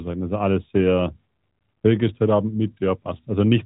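Speech, band-limited to 4 kHz as expected of the AMR narrowband mobile codec (the light coding texture fits its top 12.2 kbps mode), with no technical faults to report.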